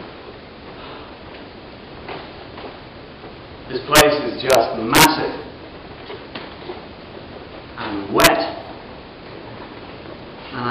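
Integer overflow hits four times: 3.96 to 4.01 s, 4.50 to 4.55 s, 4.95 to 5.05 s, and 8.20 to 8.27 s. Each time the sound pushes past full scale, by about 5, 1, 6 and 5 dB, and instead of being held at the limit the samples wrap round to the opposite extreme. You hear that as harsh, violent cracks, far sharper than ordinary clipping. The 4.95 s burst is the nastiest of the lot.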